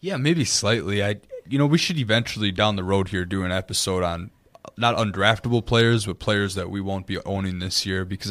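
No technical faults can be heard anywhere in this speech.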